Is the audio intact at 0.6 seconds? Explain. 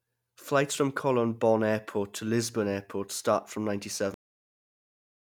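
Yes, the speech at 0.6 seconds plays through intact, with no dropout, click, distortion or other fault at that moment.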